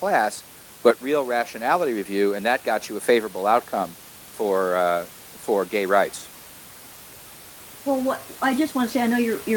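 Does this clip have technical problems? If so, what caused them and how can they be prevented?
No, this clip has no technical problems.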